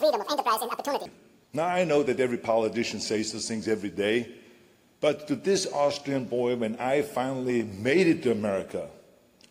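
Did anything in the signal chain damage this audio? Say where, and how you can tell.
Yes. The opening section, 0.0 to 1.06 s, runs at the wrong speed, 2.0 times too fast, with pitch raised by around 10 semitones, likely from a playback clock mismatch.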